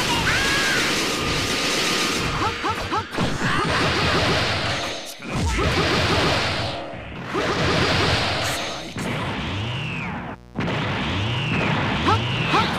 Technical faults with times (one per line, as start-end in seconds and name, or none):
8.63-12.78 mains buzz